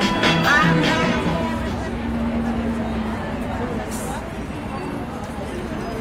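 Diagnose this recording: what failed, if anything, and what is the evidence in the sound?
Call bitrate drop at the codec stage, 3.03 to 5.79 s. The sound turns rough and dull, worst for about 1.45 s, which fits a fall from 40 to 18 kbps.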